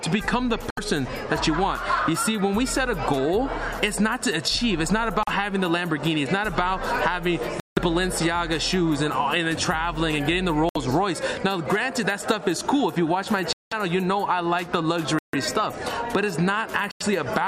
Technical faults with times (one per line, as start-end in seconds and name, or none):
0.70-0.79 Bluetooth stall
5.23-5.29 Bluetooth stall
7.60-7.78 Bluetooth stall
10.69-10.77 Bluetooth stall
13.53-13.73 Bluetooth stall
15.19-15.35 Bluetooth stall
16.91-17.02 Bluetooth stall